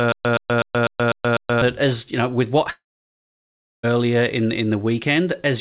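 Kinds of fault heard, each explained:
Stutter with silent gaps: A 0.12 s burst repeats every 0.25 s with digital silence between, already under way at the start and ending at 1.62 s before "that as you know". The likely cause is a stalled stream replaying its last fragment.
Long network dropout: After "you know with what" at 2.7 s, the sound trails off into about a second of silence until 3.85 s, with roughly 1.1 s missing. The likely cause is that no audio arrived during that stretch.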